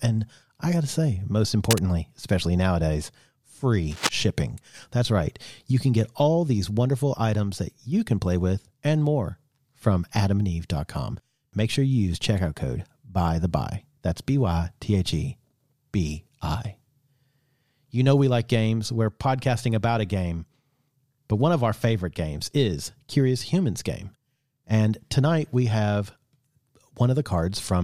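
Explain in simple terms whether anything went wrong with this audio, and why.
Cable scratch noise appears twice: from 1.60 to 1.79 s, between "got to say most" and "especially nowadays", and again from 3.91 to 4.10 s. Each is a fifth-of-a-second rough rustle laid over the speech, a little quieter than the voice, likely from a worn cable or connector being moved. A single click would be an instant tick, not this dense, uneven scratching.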